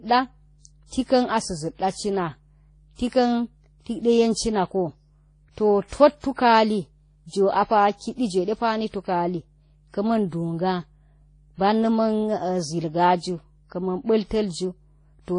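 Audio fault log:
throughout: mains hum. A steady 50 Hz tone with low harmonics sits under the speech, roughly 35 dB below it, as if a ground loop or nearby transformer were leaking the power line into the signal path. It stays constant through pauses and speech alike.
throughout: transcoding between lossy codecs. Nothing is present above about 10.1 kHz, and two different sets of low-bitrate smearing and swirling overlap. This likely comes from the speech passing through one low-bitrate codec and then a second, with the later encoder spending scarce bits re-encoding the first one's artefacts.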